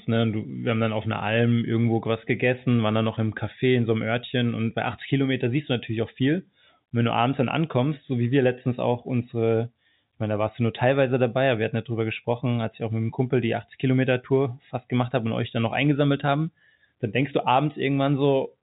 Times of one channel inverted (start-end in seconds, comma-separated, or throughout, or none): none